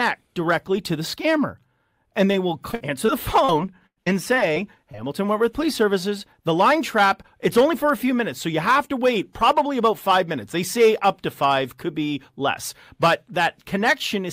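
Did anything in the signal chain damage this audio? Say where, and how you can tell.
Yes, the damage happened in network transport: repeated packet loss (robotic sound) across two stretches of the speech, 2.71 to 3.50 s and 3.86 to 4.97 s. The first has four short dropouts, none longer than 51 ms. The second has five, the longest 100 ms. Each missing piece is patched by extending the preceding sound, so the audio turns choppy, with roughly a sixth of each stretch synthesised rather than received.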